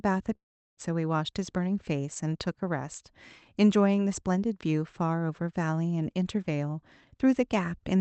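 A long network dropout, likely a burst of lost packets, cuts off the speech from 0.35 to 0.79 s. The receiver stretches the last sound into a brief fading buzz, then near silence. Speech resumes missing about 0.42 s, band-limited to 8 kHz by the call path.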